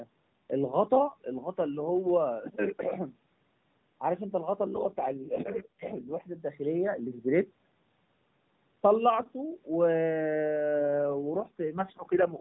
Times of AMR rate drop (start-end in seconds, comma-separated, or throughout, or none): 4.76-6.37, 10.79-12.40